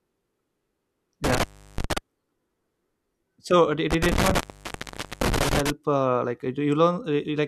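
Intermittent contact breaks the speech twice. From 1.24 to 1.98 s a loose connection in the cable or plug opens for about 350 ms. The signal drops out with crackle at each edge, and faint hiss fills the gap. The second break follows "uh did" and runs from 3.91 to 5.70 s, with the line open for about 815 ms. A codec dropout would cut cleanly without the crackle, so the scratchy edges and the hiss during the silence point to a physical contact fault.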